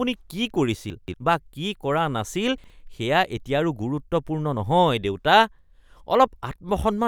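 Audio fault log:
0.90–1.14 s and 2.58–2.70 s, chunks out of order: The sound briefly jumbles. In both places the audio is cut into 60 ms pieces, and one piece plays late. At 0.90 s it lands three pieces after its proper place, so a 240 ms stretch is scrambled. At 2.58 s it is one piece late, so two neighbours swap over 120 ms. Nothing is missing. The waveform jumps at each seam.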